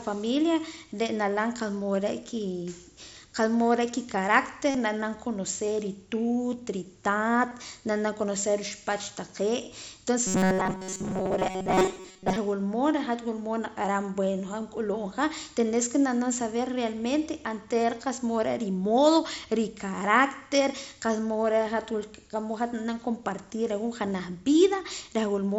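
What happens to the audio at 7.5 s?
At 7.50 s there's a brief concealed Bluetooth headset packet loss, about 15 ms of audio dropped on the link between headset and phone, which points to a couple of lost frames. The receiver covered the hole by repeating the closest-matching piece of the waveform from just before it: a tiny buzzy smear before the real audio picks back up.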